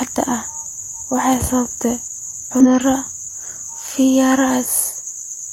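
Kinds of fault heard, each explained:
Damaged data in a compressed stream: Part of the encoded speech stream is corrupt, so the decoder cannot read those frames correctly. It loses its place and hunts for the next valid frame header before normal playback resumes. Here the damage is heard as a brief squawk or blip from 2.60 to 2.71 s, about a tenth of a second, breaking into the speech abruptly. The speech then continues cleanly.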